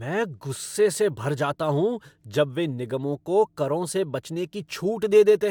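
The speech recording here has no audible technical fault at any point in the signal.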